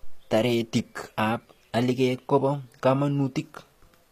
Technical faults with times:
0.00-4.12 HE-AAC compression

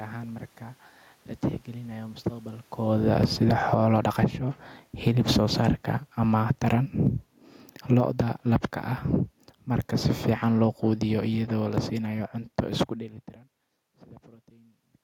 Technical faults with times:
2.78-4.38 automatic gain falling
4.29-4.79 automatic gain rising
4.92-5.62 automatic gain falling
6.19-8.19 automatic gain falling
8.10-8.65 automatic gain rising
9.92-12.92 automatic gain falling

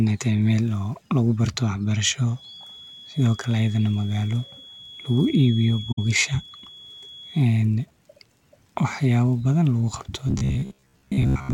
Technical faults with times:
2.31-7.50 feedback whistle
5.91-5.99 AAC frame loss with muting
10.28-11.53 robotic sound from repeated short buffers

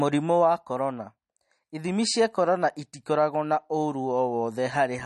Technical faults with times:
0.00-5.06 MP3 compression

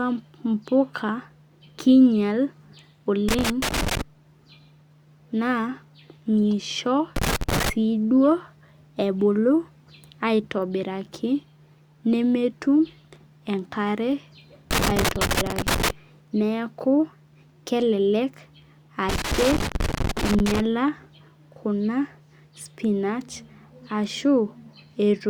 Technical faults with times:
3.28-4.01 loose connector crackle
7.16-7.70 loose connector crackle
14.71-15.90 loose connector crackle
19.09-20.60 loose connector crackle

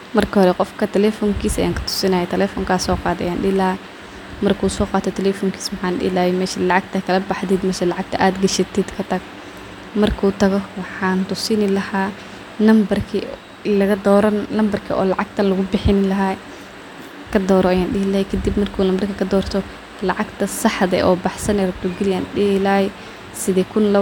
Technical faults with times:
none

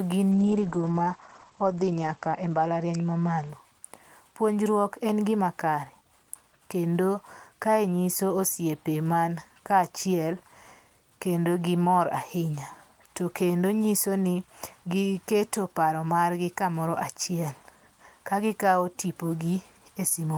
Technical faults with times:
0.34-3.97 call bitrate drop

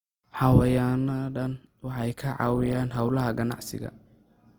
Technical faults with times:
0.00-4.58 Opus compression

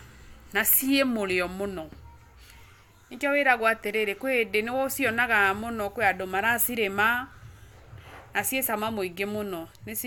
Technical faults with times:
none

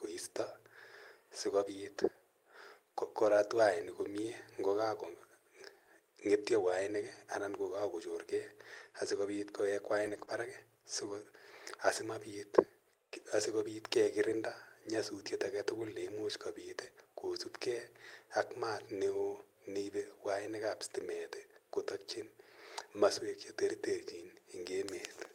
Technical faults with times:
3.25-3.27 lost packet rebuilt from error correction
10.05-10.31 lost packet rebuilt from error correction
10.25-10.29 short concealed packet loss

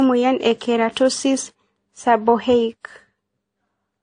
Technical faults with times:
0.00-4.03 transcoding between lossy codecs

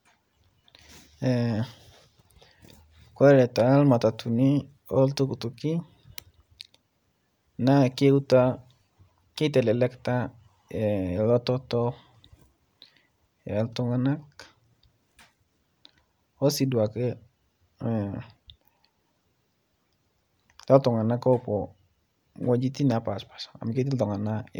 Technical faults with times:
none

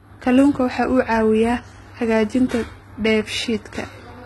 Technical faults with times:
0.00-4.25 HE-AAC compression

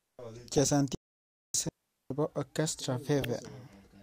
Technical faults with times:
0.53-0.58 DAB burbling
0.95-1.54 playback stall
1.69-2.11 digital wireless dropout
3.22-3.25 DAB burbling

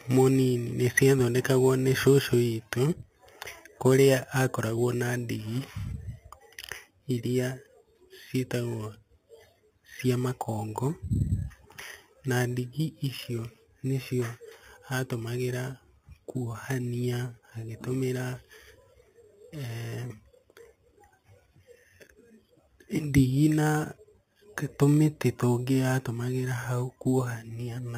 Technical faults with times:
0.00-27.98 imaging from sample-and-hold upsampling

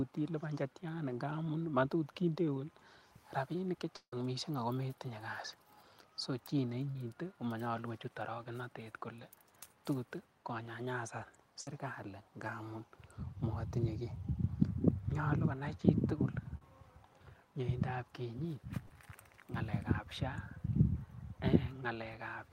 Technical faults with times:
3.96-4.13 long network dropout
6.91-6.96 short concealed packet loss
11.61-11.67 burst of packet loss
12.47 short concealed packet loss
16.57-16.62 short concealed packet loss
18.86-18.90 short concealed packet loss

